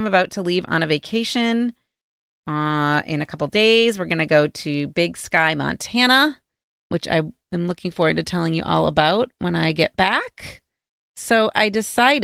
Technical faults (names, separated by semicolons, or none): none